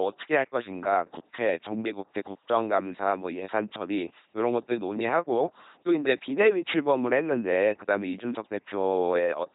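Throughout, the speech passes through an LPC-10 vocoder at 2.4 kbit/s, heavily damaged. A pulse train or noise drives a ten-pole filter, giving buzzy robotic sound with nothing above 3.8 kHz.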